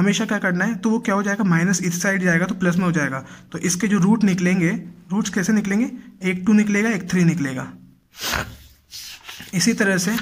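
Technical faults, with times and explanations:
Throughout: Wi-Fi interference, a faint, steady ticking about 50 dB below the sound, repeating every 102.4 ms, just under ten ticks per second. A nearby Wi-Fi radio's beacon transmissions are picked up and rectified by the audio circuitry, so each beacon becomes a short click. That regular ten-per-second rhythm distinguishes it from mobile-phone interference, whose bursts repeat at 217 Hz and merge into a buzzing drone rather than separate ticks.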